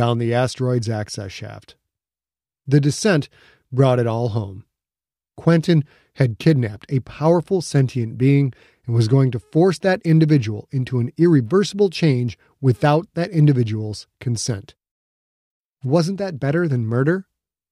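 Listening through the speech recording, nothing stood out as a technical fault at any point.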